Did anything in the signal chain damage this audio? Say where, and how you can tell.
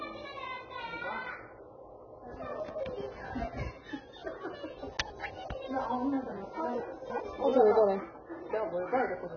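Yes. At the codec stage, the whole clip is dull and band-limited, with a smeared, warbling, fizzy texture on sustained sound. That heavy damage is likely from AAC compression. It fits AAC-LC at a very low bitrate, roughly 16 kbps, where the coder drops high bands and fills holes.

At the network or buffer stage, chunks are out of order at 2.6 to 2.8 s, 4.9 to 5.2 s and 6.8 to 7.2 s. Each sounds like a brief jumbled stretch. A 100 ms chunk plays late, displaced by about 100, 200 and 300 ms respectively.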